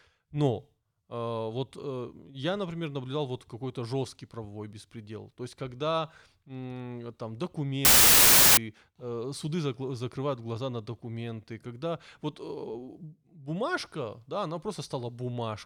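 From 7.85 to 8.57 s the speech gives way to a loud burst of harsh noise, with the original sound buried inside it, dragged to half speed and an octave low, just before "э суды закрывают глаза". This is a wrong sample width fault: audio stored as 32-bit integers was read as 16-bit. Each sample splits into two, so only the upper halves carry the real waveform and the lower halves add noise.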